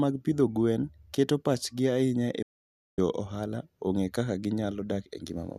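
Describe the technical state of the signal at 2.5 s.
At 2.5 s the speech sits inside a digital broadcast dropout running from 2.42 s to 2.98 s. The receiver stopped getting usable frames, either because the signal dropped out or because frames failed their checksum, so it muted its output until valid data returned. The sound fades to silence in about 3 ms, an almost instant cut, and stays silent for roughly 0.55 s. Whatever was transmitted during that gap is lost, not delayed.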